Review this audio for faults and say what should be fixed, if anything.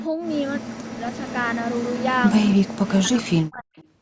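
Echo leak: a copy of the speech, about 10–30 dB below it, trails about 281 ms behind at 0.00–0.08, 0.97–2.21, 2.39–2.56 and 3.77–3.84 s, likely loudspeaker pickup the far-end canceller missed; unlike reverb, it repeats at one fixed delay.

Speech suppressed in double talk: the speech sinks by up to about 40 dB at 0.59–1.14, 2.65–2.82 and 2.98–3.77 s while the other side talks, likely the canceller ducking both sides. Unlike a dropout, it follows the overlapping talk rather than cutting to silence at random.

Better echo cancellation at the loudspeaker end, or a headset there, would prevent both.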